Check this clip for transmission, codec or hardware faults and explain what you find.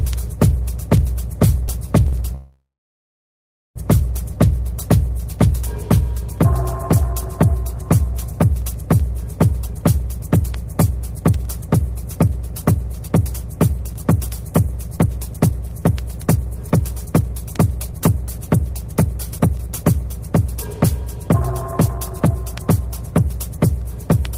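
Three network-related faults appear, all in the receive path.

A short stall from a late packet at 2.08 to 2.15 s holds the last sound for 45 ms while the jitter buffer sits empty, showing as a smeared, repeated waveform stretch.

A call audio freeze runs from 2.35 to 3.78 s. The sound fades into about 1.1 s of flat silence, a blank spectrogram band, then resumes intact, likely from held-up packets.

A jitter buffer speed-up from 9.5 to 24.2 s trims pitch periods to play at 109% with unchanged pitch. It drops roughly one and a half seconds and compresses the spectrogram's timing.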